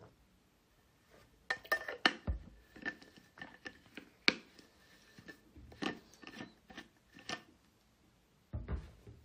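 No faults are audible anywhere in this recording of everyday sounds.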